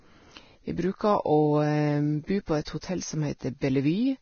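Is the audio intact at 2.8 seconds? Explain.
No. From 2.81 to 2.83 s there's pre-echo: the codec smears its noise across the block, so a brief hiss leaks in ahead of the attack and softens it. The whole stretch also sounds hissy and grainy with nothing above 6.6 kHz, likely heavy Vorbis compression at a low bitrate coarsely quantising the treble.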